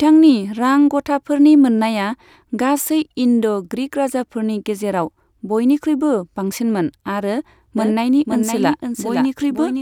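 Speech, with a doubled audio track from 7.78 s to the end: a second full-band copy of the speech enters abruptly and trails the original by about half a second, roughly 5 dB quieter, with no decay or room colour. The likely cause is the signal being captured again through a slower path. On a spectrogram, each syllable's harmonic pattern reappears intact a fixed half-second later. The waveform shows overlapping, offset envelopes with a sudden onset.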